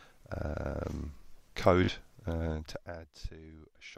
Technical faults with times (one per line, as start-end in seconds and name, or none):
1.84-1.89 Bluetooth stutter